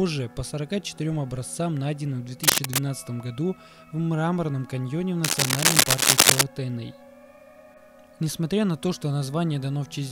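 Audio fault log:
2.43 to 2.79 s and 5.24 to 6.43 s, cable scratch noise: two bursts of dense, ragged scratching and rustling sit a bit louder than the sound itself, the second lasting over a second. That's likely a worn cable or connector being moved, its contact resistance jumping around.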